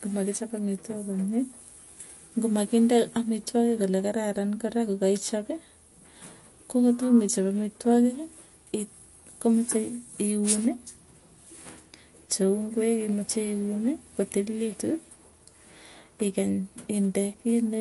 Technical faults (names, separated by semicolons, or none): MP3 compression